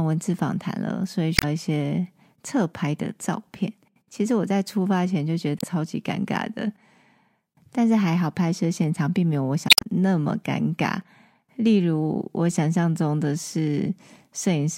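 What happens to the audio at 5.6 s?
From 5.58 to 5.64 s the speech is hit by damaged data in a compressed stream. The decoder misreads corrupted frames and resynchronises at the next valid header, heard as a brief chirp, squawk, click or short hole.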